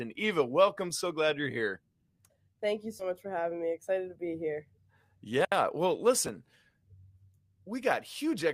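At 2.99 s, just before "much for having me", compressed frames are skipped: about three 20 ms frames vanish, so the speech jumps ahead by about 70 ms.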